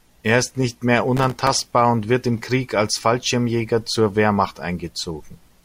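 From 1.17 to 1.74 s, after "ist nicht mehr", the processor misses dozens of deadlines for its tiny buffers, each about a millisecond and a half, leaving brief silent gaps. This processor overload crackle tears through the speech as gritty, hard-edged dropouts until "und wird im".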